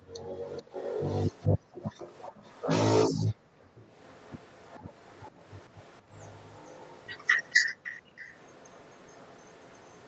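From 0.00 to 0.36 s the room sound drops out sharply. This is background gated by the echo canceller. It pulled the microphone down by about 40 dB while the far side was playing. The room tone vanishes, then returns.

From 0.52 to 1.47 s a delayed copy of the speech follows the talker, 433 ms behind. This is an echo leak. It sits about 10 dB below the speech. The likely cause is a loudspeaker on one side, with its canceller missing part of the pickup and sending it back.

From 1.49 to 1.73 s the gating returns, again about 40 dB deep. The echo then comes back from 1.73 to 2.66 s, weaker, about 20 dB down.

From 3.11 to 3.76 s the background is gated again by about 40 dB, for the longest stretch. From 3.76 to 8.01 s the echo continues at the same 433 ms delay, about 25 dB down.

From 8.01 to 8.18 s there is a shallower dip of about 21 dB. The echo then runs to the end, faint, about 30 dB down. 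The call microphone processing can be heard limiting the band, with nothing above 8 kHz.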